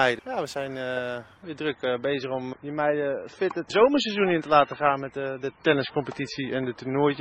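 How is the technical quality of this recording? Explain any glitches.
The quality drops audibly partway through. From 1.43 s onward, everything above 8.3 kHz vanishes and codec artefacts rise suddenly, without a gap. This is an adaptive stream at a lower bitrate, which fits a switch to roughly 17 kbit/s MP3.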